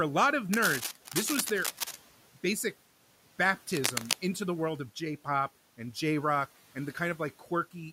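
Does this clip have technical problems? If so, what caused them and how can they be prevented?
Yes. Cable scratch noise from 0.53 to 1.96 s, after "a lot of", and from 3.73 to 4.14 s, before "into the world of": dense, uneven crackle, first slightly below the speech, then about as loud. It is likely a worn cable or connector being moved. The bursts are irregular and scratchy rather than steady like hiss or single sharp clicks. Replace worn cables and connectors and keep them still while recording.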